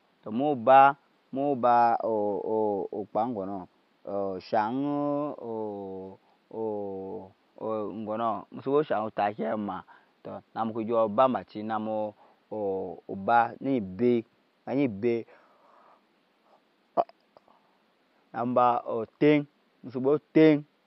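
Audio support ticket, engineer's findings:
No faults found in the clip. Room noise is present under the speech, sitting about 42 dB below it, which is part of the recording environment and not a system issue.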